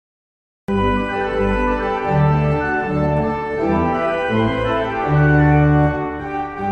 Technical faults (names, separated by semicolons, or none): cut-off start